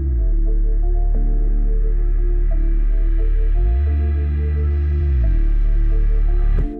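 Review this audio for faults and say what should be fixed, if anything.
From 4.57 s to 6.23 s there is a Bluetooth SBC bit pool drop. The treble goes dull and a gritty noise rises over the sound. Then the detail returns. The link was congested, so the sender cut the bits per frame. The top sub-bands got few or no bits, and the rest were quantised coarsely. The sound points to a fall from a bit pool near 28 to about 10, roughly 84 kbps. To prevent it, reduce radio congestion or use a codec and link setting that holds a higher minimum bit pool.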